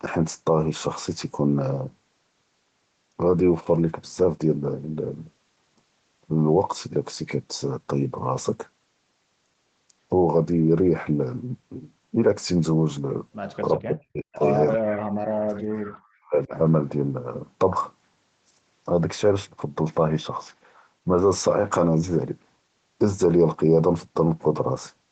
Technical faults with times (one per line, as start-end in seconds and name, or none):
13.79-14.43 speech suppressed in double talk
14.73-16.52 speech suppressed in double talk